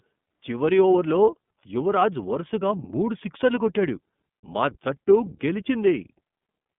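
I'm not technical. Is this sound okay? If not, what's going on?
No. Throughout, the speech has the iLBC codec sound: muffled above 3.5 kHz like a phone call, but also rough and synthetic, which plain phone-line muffling wouldn't cause.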